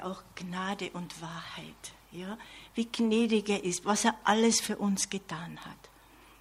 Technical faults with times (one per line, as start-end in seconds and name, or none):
5.62 bit error spike